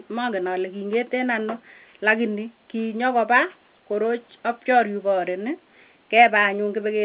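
Nothing's wrong here: a short speech recording carried over an ordinary A-law telephone line, with the narrow band that kind of coding always gives, and no faults to point to anywhere in it.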